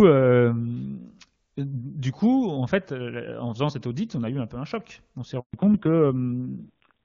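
At 5.40 s a handover gap cuts into the speech: the call is moved between networks, and for 140 ms, until 5.54 s, no speech frames arrive. The voice decays within a few tens of milliseconds and the line goes silent until the new link delivers audio again. Whatever was said in that window is gone rather than concealed, so the listener hears a clean hole in the speech.

From 5.54 s to the end, the call falls back to narrowband. Before the switch the HD Voice wideband codec carries the voice with little or no audible damage, in keeping with a high AMR-WB rate. After the handover nothing remains above 4 kHz, so the upper part of sibilants and breath detail is lost. The voice turns muffled and gritty, and that coarse texture points to a low-rate AMR narrowband mode, around 6 kbit/s.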